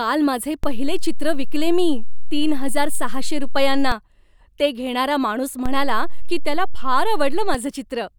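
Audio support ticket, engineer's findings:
DC step at 0.64 s, reverting at 3.92 s, and again from 5.66 s, just after "ते घेणारा माणूस", reverting at 7.55 s. Offset about −14 dBFS. Probable component: converter or switched input with offset. Low thump at each edge, speech intact, unlike a dropout.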